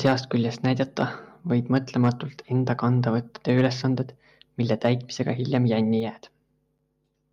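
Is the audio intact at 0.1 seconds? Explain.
No. At 0.1 seconds you're right inside a stretch of microphone overload running from 0.05 to 0.12 s. The peaks there are pushing past the converter's limit by about 4 dB, with something like 7 percent of the samples flattened at that limit, so the loudest part has that harsh, crackly, squared-off edge. The likely cause is the mic input gain set too hot, driving the converter into its limit and chopping the tops off the waveform.

There's also a microphone volume step-down at 0.06 s, just as that distortion kicks in. Everything, speech and background alike, drops by about 2 dB in one sudden notch rather than a smooth fade. It sounds like the call software probably noticed the clipping and pulled the device's input volume down a single step. Even so, the overload keeps crackling on through 0.1 s.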